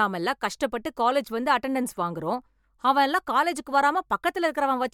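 No technical faults can be heard anywhere in the speech. Nothing in how the audio was captured or delivered calls for comment at any point.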